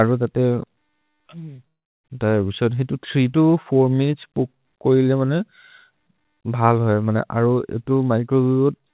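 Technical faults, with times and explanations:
1.56–1.60 s, short concealed packet loss: About 20 ms of audio didn't reach the decoder in time, so the receiver stretched the last bit of sound over the gap and blended back into the real signal. You hear it as a tiny smear or wobble rather than a clean cut. Anything brief that fell in that window can be lost. It's all inside the narrow band that stops at 4 kHz, which fits G.711 mu-law at 64 kbps.
1.68–2.06 s, long network dropout: The audio stops arriving for roughly 0.36 s, most likely because the network dropped a run of packets. The receiver first carries the last sound on as a fading buzz or hiss, then gives up, leaving near-silence or low steady noise for most of the stretch. When the audio resumes at 2.06 s, it skips ahead, so the missing part simply isn't there.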